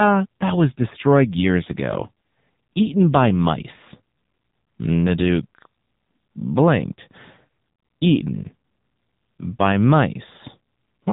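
AMR narrowband mobile codec damage runs through the whole of this speech clip, with nothing above 3.8 kHz. The heavy buzzy, synthetic quality points to a low bitrate, around 6.7 kbps, where sparse pulses in each 5 ms subframe drive a crude vocal-tract model.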